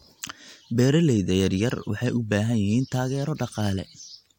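No technical faults can be heard anywhere in the recording, with the speech signal arriving intact and continuous throughout.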